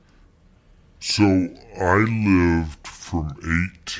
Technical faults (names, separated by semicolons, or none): wrong sample rate